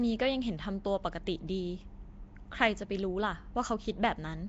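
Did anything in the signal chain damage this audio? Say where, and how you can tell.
Yes, at the codec stage. Throughout the speech there's a rough, hissy halo around the voice and a smeared, underwater quality, with nothing above 7.7 kHz. The likely cause is Nellymoser compression. Weak bands got no bits and were refilled with noise, which fits a stream of about 32 kbps. A plain low-pass filter would leave the speech clean, and MP3-style swirl lacks this steady noise-fill grit.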